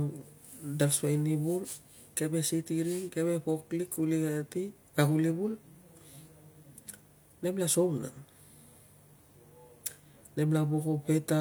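No technical faults can be heard at any point in this speech recording.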